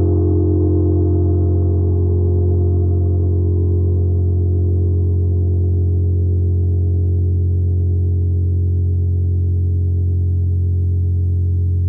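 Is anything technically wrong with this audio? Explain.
No, nothing technical stands out here; it all sounds fine from beginning to end.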